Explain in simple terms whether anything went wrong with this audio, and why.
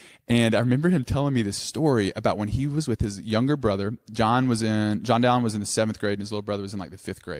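Nothing went wrong that I could hear; listening through this speech recording, nothing stood out as a problem.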